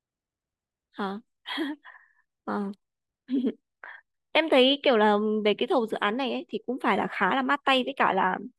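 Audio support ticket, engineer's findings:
No technical faults found on listening; the speech signal is continuous and stable, with no audible artefacts from the capture, processing or transport path.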